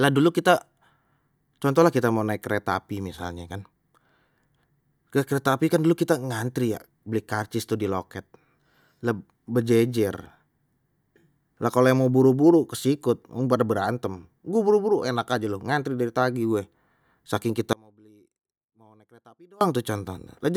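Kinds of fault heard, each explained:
Audio dropout to a faint residue: the signal feed was likely interrupted while the path downstream stayed live, so the speech cuts out abruptly for about 1.9 seconds near the end, leaving only faint sound roughly 30 dB below normal level before it snaps back.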